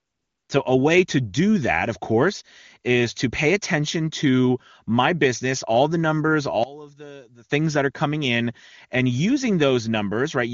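Right at the start, from 0 to 0.49 s, there's AMR comfort noise. For about half a second the phone decided nobody was talking and sent no speech frames, so the far end just invented a background from a rough sketch of its level and colour. You hear a smooth, even hiss instead of the real room sound, and it drops away once proper speech frames arrive. The wideband coding that follows is clean, consistent with one of the upper AMR-WB rates, with at most a faint codec edge.

Between 6.64 and 7.50 s the speech suddenly sinks by about 20 dB, as if the centre of the image has been scooped out. That's most likely one channel inverted: with one side's polarity flipped, everything common to both channels cancels when they're folded to mono. What survives is just the small difference between them, a weak, faint ghost of the voice, before the level snaps back.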